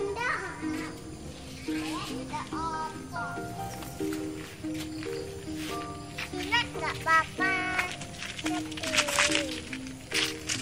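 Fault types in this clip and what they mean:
Nothing stood out on listening to this audio.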